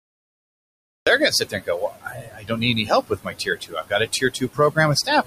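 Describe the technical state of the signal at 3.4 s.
At 3.4 s the speech sounds swallowed: soft consonants and word endings fade out along with the background, so parts of the speech come across faint or missing. This is speech cut by the noise suppressor, running from 3.07 to 4.78 s and affecting roughly 0.7 s in total within that span. The suppressor mistook quieter speech for steady noise and pulled those frames down with the background, by about 20 dB at the deepest point.

The same moment also carries noise suppressor artifacts, which run through the whole clip. The residual background drops away in pauses and rises again under the speech. The suppressor attenuates, frame by frame, every frequency band it judges to be noise, here by about 21 dB. It is acting on room noise that sits about 13 dB below the speech.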